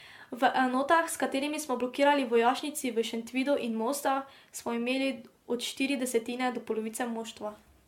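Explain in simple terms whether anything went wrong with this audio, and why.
Something did go wrong, and it runs through the whole speech clip. The sound is swirly and hollow, the edges of sounds are blurred rather than crisp, and a watery smearing hangs around everything. This is generation loss, likely from the audio being squeezed and unpacked with the same kind of compression about seven times over. A single pass of heavy compression sounds thin but fairly stable. Here the damage has piled up, making it murkier and more smeared than one pass would.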